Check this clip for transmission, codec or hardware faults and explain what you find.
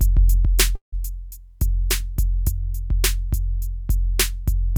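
One fault stands out: a call audio freeze in the music, from 0.75 s to 0.94 s. At that point the music stops moving forward. The last sound hangs on briefly, then drops to silence for about 130 ms. The likely cause is packets held up in transit, letting the jitter buffer run dry. When the music resumes, it picks up exactly where it broke off. Nothing is skipped. Instead, a 170 ms pause has been inserted, so everything after it arrives that much later.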